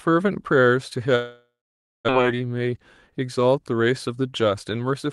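From 1.15 s to 2.11 s the speech stops and the last sound is drawn out as a buzzy, hissing tail that fades away, leaving about half a second of near silence before speech resumes with a piece missing. This is likely a long network dropout. No audio arrived for roughly 0.8 s, the receiver improvised a fading continuation to cover the gap, and the lost stretch was never recovered. The late restart adds roughly 70 ms of extra delay.

Right after, from 2.18 s to 3.29 s, the speech sounds slightly rushed while its pitch stays the same, running at 106% of normal speed. This is a jitter buffer speed-up. Once delivery recovered, the buffer was holding more audio than its target, so the receiver trimmed many tiny pitch-period-length slices in quick succession until about 70 ms had been removed, pulling the latency back down. The call-codec coloration heard throughout fits Opus at around 32 kbps, with content above 12 kHz cut off.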